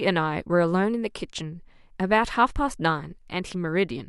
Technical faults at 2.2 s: none

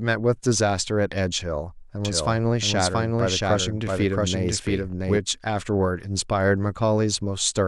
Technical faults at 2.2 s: doubled audio track

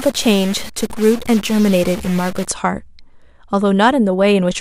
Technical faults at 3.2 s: none

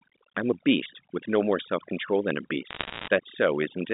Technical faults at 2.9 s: overdone noise removal; bit errors on a digital phone line

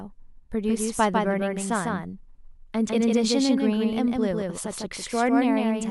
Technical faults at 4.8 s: doubled audio track

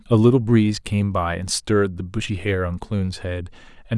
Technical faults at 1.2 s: none

